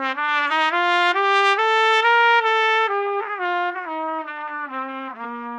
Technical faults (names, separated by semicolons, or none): compressed frames skipped